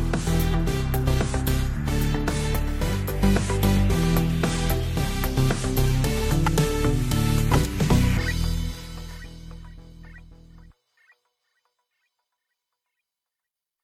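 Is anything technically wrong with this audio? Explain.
Yes. From 3.00 to 7.79 s, digital radio blending to analogue occurs. The receiver cross-fades over 232 ms to FM, bringing hiss roughly 35 dB down and a level shift of about 1 dB.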